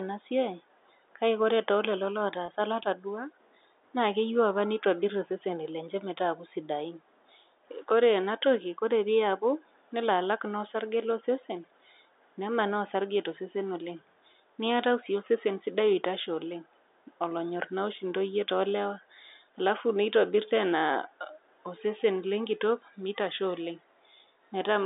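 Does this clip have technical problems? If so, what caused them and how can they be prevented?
Yes. At 2.46 s there is packet loss with pitch repetition: about 20 ms of sound went missing, likely a single lost packet. The receiver filled the gap by repeating the last pitch period, so it sounds briefly held and buzzy. A jitter buffer with forward error correction would help prevent this.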